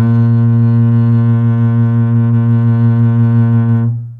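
No technical faults can be heard anywhere in this music.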